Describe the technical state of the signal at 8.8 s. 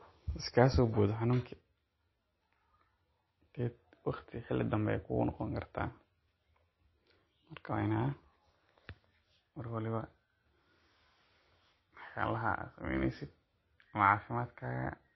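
At 8.8 s the speech shows the watery, swirly texture of likely MP3 compression, present throughout. Nothing sounds above 5.8 kHz, which fits a starved bitrate near 24 kbps.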